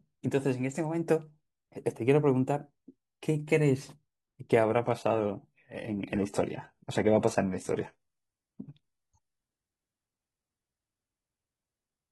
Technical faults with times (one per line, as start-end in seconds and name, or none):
4.63-12.12 adaptive stream at a lower bitrate